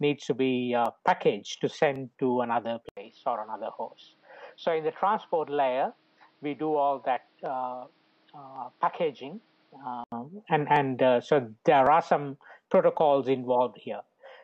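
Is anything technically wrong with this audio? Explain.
Yes. From 2.89 to 10.12 s the sound goes dull and boxy, with nothing above 5.8 kHz, a drop in level of about 5 dB and new faint background noise, after an 80 ms gap. It clears at 10.12 s. That's likely the input switched to a poorer device, with a narrower band and its own noise.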